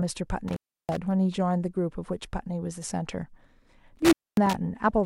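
A speech recording with two dropouts from an intermittent contact: 0.48 to 0.97 s, with the line open for 326 ms, and 3.96 to 4.54 s, open for 245 ms. Each sounds like a loose cable or plug briefly losing connection. The signal cuts out with crackle at the break and at the reconnection, and faint hiss remains during each gap.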